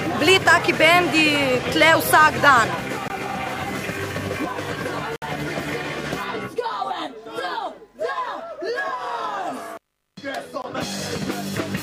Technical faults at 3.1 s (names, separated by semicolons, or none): block of digital silence